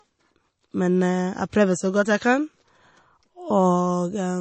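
MP3 compression runs throughout the speech: nothing is heard above 8.3 kHz, and a clearly audible watery, swirling texture persists. The likely cause is a starved encoder, consistent with about 32 kbps, cutting the treble and letting weak frequency lines flicker between frames.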